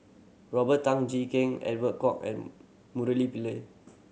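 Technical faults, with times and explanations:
No faults: the speech passes through call microphone processing, which trims the lowest bass and carries nothing above 8 kHz.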